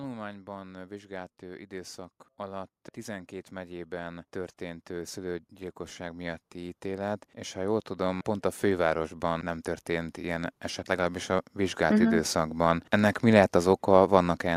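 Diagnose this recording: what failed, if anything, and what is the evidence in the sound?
Automatic gain rising in call processing: from 0.43 s to 12.63 s speech and background swell together by about 22 dB, as a widening waveform envelope.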